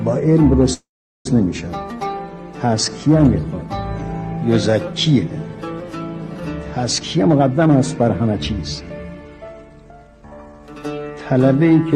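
At 0.73 s a call audio freeze begins. The last sound carries on as a brief fading buzz, then about 0.41 s of silence, until the audio resumes at 1.27 s. It likely comes from delayed packets draining the jitter buffer, so about 0.52 s is inserted and nothing is lost. A spectrogram shows a smeared, decaying band and then an empty gap.

Two jitter buffer speed-ups follow, from 7.01 to 8.28 s at 118% speed, then from 8.80 to 10.6 s at 113%. Short pitch-period pieces are cut repeatedly, roughly a fifth and then a third of a second in total, so the sound hurries without changing pitch. On the waveform, cycles keep their normal length, with no visible gaps.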